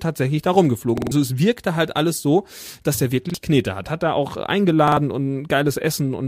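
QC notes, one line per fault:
0.98–1.12 s, repeated buffer: just after "tatsächlich da", one short slice of the speech plays four times in a row, each pass about 46 ms long with a hard seam at every restart, so it comes across as a quick machine-gun stutter. The spacing fits a 2048-sample buffer being replayed while the device waited for fresh audio, and roughly 150 ms of the real speech is gone by the time "es wirkte halt alles" arrives.
3.30–3.34 s, repeated buffer: after "alles so dass der", a single extra pass of the same 46 ms slice gives a brief doubled blip, with about 50 ms of speech skipped.
4.88–4.97 s, repeated buffer: after "er auch", the slice sounds three times, a shorter stutter losing about 100 ms. What separates all three from a plain dropout or packet-loss gap is that there's no silence: identical audio returns at a steady 46 ms period, while a codec concealment would smear or fade rather than replay exact copies.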